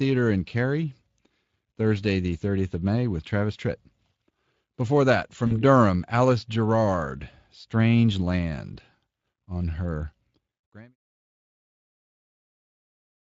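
VoIP packet loss concealed by the speech codec, 5.47 to 5.63 s: a 40 ms gap, fitting two lost frames, is extrapolated into a brief buzzy or noisy, fading smear.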